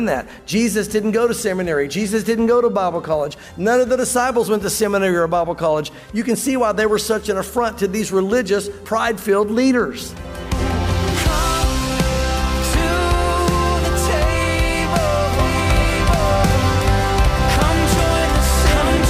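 At 15.39 s a doubled audio track starts abruptly and runs to the end: a full-band copy about as loud as the original trails it by roughly one second, likely from a second, slower capture path. The spectrogram shows every pattern repeated a second later, with no decay.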